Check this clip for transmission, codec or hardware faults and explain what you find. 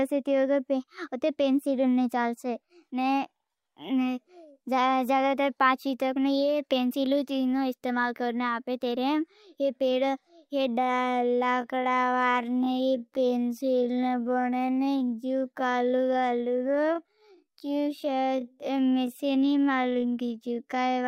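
There is one fault, a time-stretched section running from 10.71 s to the end of the clip. Software likely stretched this part to fill a longer span, slowing it to 0.59 times its original speed while holding the pitch steady by repeating short fragments of the signal. At 10.71 s the speech abruptly slows to a drawl with no drop in pitch, and the dragging pace continues to the end.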